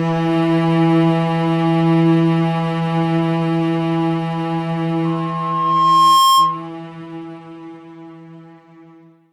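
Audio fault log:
5.05–6.68 s loudspeaker feedback squeal: a 1.1 kHz tone swells over about a second to roughly 5 dB above the sound, as the microphone–speaker loop exceeds unity gain there.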